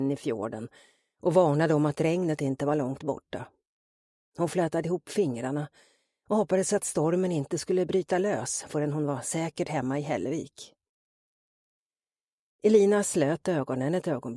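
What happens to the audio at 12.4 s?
At 12.4 s the audio plays through intact, with no dropout, click, distortion or other fault at that moment.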